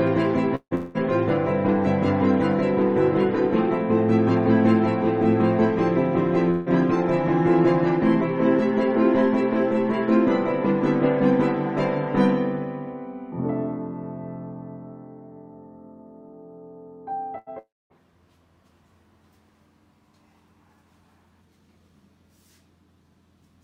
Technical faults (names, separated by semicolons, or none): long network dropout; burst of packet loss